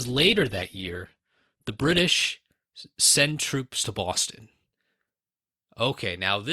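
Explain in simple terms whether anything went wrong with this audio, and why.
For the first 2 seconds the speech sounds dull and smeared, with no crisp top end. At 2.0 s it suddenly becomes clearer and fuller, with no gap or pause. This is an adaptive stream starting at a low bitrate: the player began on a heavily compressed version that strips out the highest sounds, above about 12.4 kHz, so playback could start quickly. Once it had measured the connection, it switched to a better-quality version.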